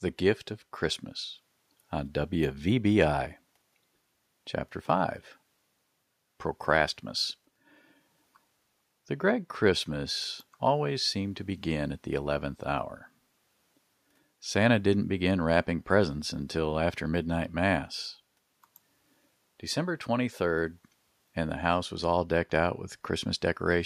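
No technical faults can be heard anywhere in the speech recording.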